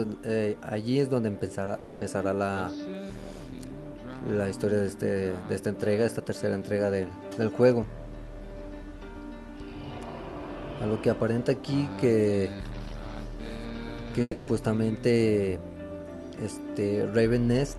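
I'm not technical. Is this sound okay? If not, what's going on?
No. There are two kinds of problem.

Short concealed packet loss happens at 1.65 s and again at 1.75 s. Each time, about a fiftieth of a second of audio failed to arrive, and the receiving end patched the gap by stretching out whatever sound came just before. You hear a tiny smear or wobble rather than a gap. What sets these apart from a dropout is that they are over almost instantly and the sound carries on right away.

A long network dropout, likely caused by the connection stalling, follows straight on from 1.79 to 2.03 s and happens again from 14.21 to 14.49 s. Roughly a quarter of a second of audio is missing each time. The gap is filled with a fading buzz or hiss, and the second one trails into a moment of silence. Then the sound resumes further along, and the missing part never comes back.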